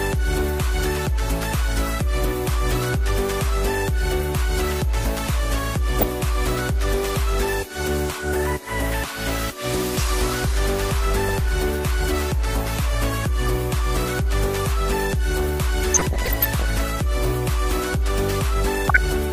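Throughout, the sound is dull and granular, with a gurgling edge. This is MP2 compression, likely at a low rate; the damage fits roughly 80 kbps. Too few bits switch off upper sub-bands, and the remaining bands are coarsely quantised.

DAB burbling then appears four times: 5.89 to 6.03 s, 11.28 to 11.35 s, 15.89 to 16.70 s, and 18.74 to 18.98 s. Bit errors slip past error correction into the audio data. Single sub-bands jump in level, giving watery blips, and in the heavier bursts bubbling chirps and squelches. The third burst is longest and worst, fitting a heavier error rate.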